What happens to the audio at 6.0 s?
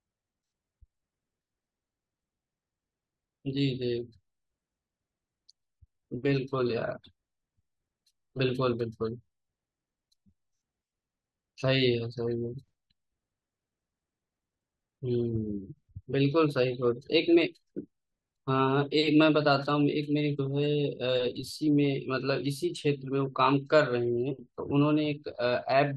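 Nothing goes wrong at 6.0 s; the speech runs through that moment intact, with no dropout, click or distortion.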